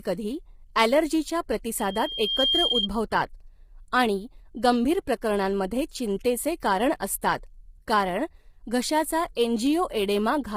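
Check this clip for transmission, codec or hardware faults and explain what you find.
Two faults are audible: codec damage across the whole speech clip and a feedback squeal early on.

Low-delay AAC compression, throughout: the speech has heavy codec damage, sounding rough and grainy, with noise filling the gaps between harmonics and a top band that sounds lowered or synthetic. The likely cause is AAC-ELD, the low-delay AAC used for video calls. It splits each short frame into a few hundred frequency lines under a low-delay window, and the quality points to a rate around 24 kbps. At that rate there are too few bits to code the spectrum cleanly, so quantisation noise spreads between harmonics and the high band is thinned or rebuilt.

Loudspeaker feedback squeal, 1.79 s to 2.88 s: a single tone at 3.2 kHz rises out of the speech, takes most of a second to build, and ends up about 5 dB above the speech. 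The microphone is picking up the loudspeaker it feeds, and at 3.2 kHz the loop gain goes above one. Each pass round the loop makes that frequency louder until the amplifier limits it or the loop is broken.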